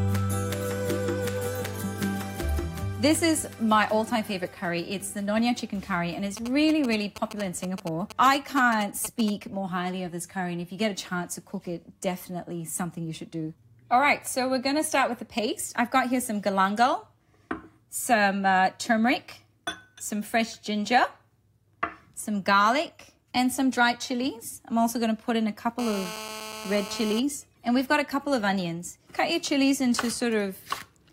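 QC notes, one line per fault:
6.37–9.30 s, GSM signalling bursts: a nearby 2G phone was exchanging short groups of radio bursts, as happens before a call or text arrives, and the audio circuit rectified them. The result is a galloping dit-dit-dit of brief 217 Hz buzzes, roughly 10 dB below the signal.
25.79–27.20 s, GSM phone buzz: a nearby 2G phone in a call transmitted continuously at 217 bursts per second, and the audio circuit rectified those pulses into a hard, raspy 217 Hz buzz rich in harmonics. It holds steady, unrelated to the sound, about 11 dB below the signal.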